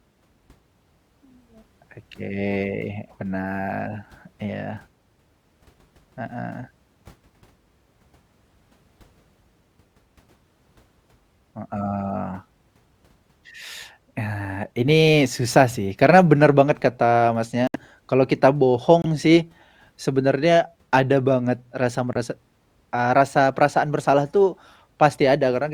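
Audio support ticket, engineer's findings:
Corrupt frame muted, three dropouts in the speech. 17.67 s, just after "karena bener banget kata": abrupt silence, 84 ms, about three frames long. 19.02 s: 52 ms hole, about two frames, right before "sih sebenarnya ada banget". 22.13 s, after "sebenarnya ada banget rasa": 35 ms, one frame. Probable component: decoder. Damaged compressed frames rejected, player fills silence. Hard onset, timing preserved.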